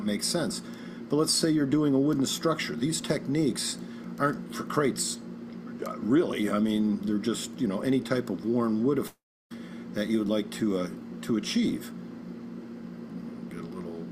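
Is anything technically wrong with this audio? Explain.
Yes. From 9.07 to 9.52 s the sound smears into a fading buzz, then goes silent and resumes with a chunk missing. This is likely a long network dropout.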